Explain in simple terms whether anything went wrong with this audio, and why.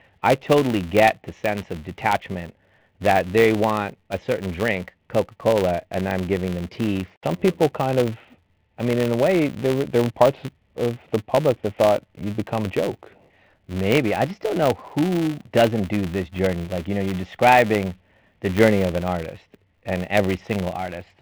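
Yes, something went wrong. A filter restarted on every block, throughout the whole speech clip. The filter forgets its state every few milliseconds and starts again from silence. Each restart makes a tiny click, about 200 per second, blending into a buzz that gets louder as the speech gets louder.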